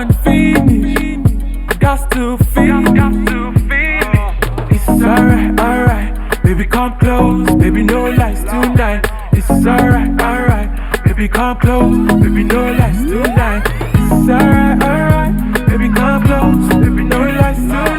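Channel delay (comb filtering) runs throughout: one channel lags by a few samples, and the mono sum cancels a first notch around 7 kHz, giving a hollow, phasey sound with fixed notches.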